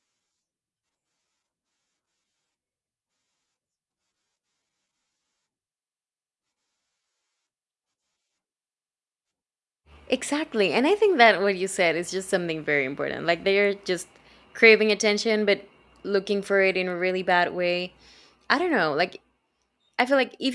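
From 14.9 s, just after "they're just craving", the resampler restarted on every block. Each 100 ms block was converted from 48 kHz to 24 kHz alone. Its edges lacked real neighbouring samples. The errors sound like regular ticks at 10 Hz, heard with signal.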